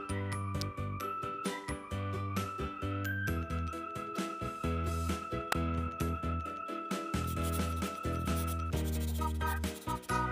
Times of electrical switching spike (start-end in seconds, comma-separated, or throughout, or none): 0.61, 5.52